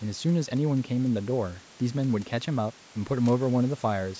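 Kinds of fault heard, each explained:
No kinds of fault are heard in this speech, which simply carries the normal character of call microphone processing, with nothing above 8 kHz.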